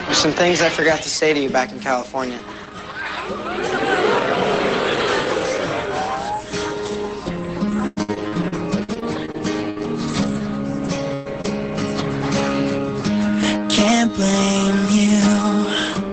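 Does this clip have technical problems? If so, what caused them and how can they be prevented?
Yes. From 7.77 s to 10.42 s the audio turns choppy, with a robotic, stuttering quality and pieces dropping out. This is repeated packet loss: thirteen separate holes in under three seconds, the longest 96 ms, with about 440 ms of audio missing in all. The receiver patched each hole by extending the last sound, so roughly a fifth of that stretch is synthetic continuation. Some of it was recovered from redundant data, around 0.3 s. Preventing this means fixing the unstable network link, for example by moving off congested Wi-Fi, and letting the jitter buffer grow when loss rises.

At 10.84 s and again at 11.44 s there are brief patches, each 20 ms, that sound grainier and noisier than the surrounding audio but leave no gap. These are lost packets rebuilt from error correction. Opus in-band forward error correction carried a low-bitrate copy of each missing frame in the following packet, and the decoder played that coarser copy. 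This call already runs at a modest 20 kbps with audio up to 8 kHz. Raising the bitrate gives the redundant copies more fidelity, and reducing packet loss means fewer of them are needed.

From 11.14 s to 11.27 s the sound freezes into a held, fading smear, then jumps ahead. This is a burst of packet loss. About 120 ms of consecutive audio never arrived in time, and the decoder filled the hole by continuing the last sound while turning it down, so the part in between is simply gone. A wired connection, or a jitter buffer deep enough to absorb short delay spikes, would prevent it.

At 11.41 s a brief wobble interrupts the audio for a few hundredths of a second. This is short concealed packet loss. About 20 ms failed to reach the decoder, which extrapolated from the preceding sound and blended back into the real signal. The tail of that gap overlaps the error-corrected frame at 11.44 s. Stabilising the network path and keeping forward error correction enabled would remove or soften these small holes.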